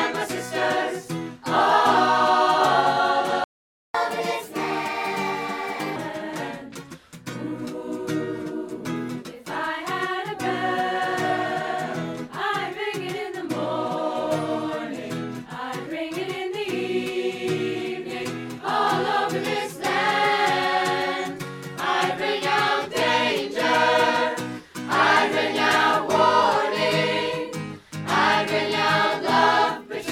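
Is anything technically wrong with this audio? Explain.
Yes, there are two related playback faults. From 3.44 to 3.94 s a playback stall cuts the sound for about half a second. The player likely ran out of data or had its thread blocked. The waveform drops to a flat line, and the spectrogram shows a blank vertical band before the sound resumes.

From 3.94 to 5.96 s comes catch-up at higher speed. The player resamples its backlog at 1.25 times normal speed, so the sound hurries and rises by about four semitones before returning to normal. The waveform looks compressed in time, and the spectrogram's harmonics shift upward over that span.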